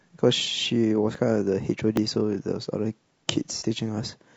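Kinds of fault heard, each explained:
Low-delay AAC compression: the speech sounds plainly rough and grainy throughout, with noise between harmonics, likely from low-delay AAC at around 32 kbps, short frames starving pitch detail.
Dropped buffer (overrun): at 1.15 s and 1.97 s the audio jumps ahead, no gap, skipping roughly 30 ms then about 10 ms; likely unread input buffers overwritten.
AAC frame loss with concealment: from 3.57 to 3.63 s a missing 30 ms frame is filled from the previous spectrum, giving a brief smeared, noisy patch.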